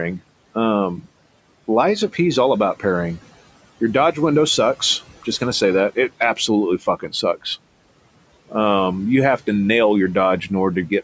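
It's a speech recording, and the room noise sitting about 20 dB under the voice gets squashed by the call's noise suppressor, roughly 18 dB, so the noise sinks between the words and rises under them. The noise suppressor also cuts speech between 6.79 and 7.23 s, dipping it by about 12 dB for around 150 ms in total, so bits there sound swallowed. Nothing reaches above 8 kHz, which is just the call's microphone processing working as intended.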